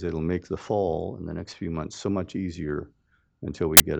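At 3.77 to 3.80 s, file tags played as audio: embedded cover-picture data read as samples bursts into very loud white noise, a hard-edged block filling the spectrogram and waveform.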